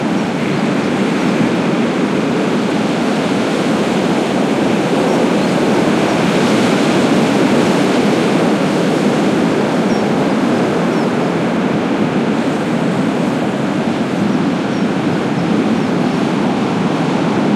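No technical faults can be heard anywhere in this recording of everyday sounds. Nothing in it calls for a time mark or a closer look.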